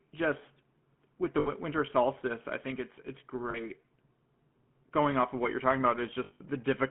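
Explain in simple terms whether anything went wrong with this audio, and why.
The whole recording sounds buzzy and gravelly, as if heard down an old mobile phone, and everything above about 3.4 kHz is missing. That is the GSM full-rate codec: it rebuilds the voice from a simplified model driven by coarse pulses, which leaves this rasping roughness.

At 1.4 s, 3.5 s and between 6.24 and 6.41 s, the sound briefly sticks and rings metallically. These are lost GSM frames. When chunks of the signal failed to arrive, the phone repeated the last good piece. The gaps lasted about 60 ms and 40 ms, and the last was broken up over about 160 ms, in stretches of up to roughly 70 ms.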